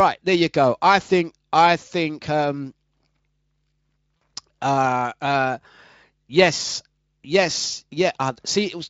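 Speech, with a brief, smeared dropout at 4.18 s just before "uh uh": VoIP packet loss concealed by the speech codec, rebuilding 40 ms of missing audio (two lost frames) from the preceding pitch, over a lightly coded Speex signal.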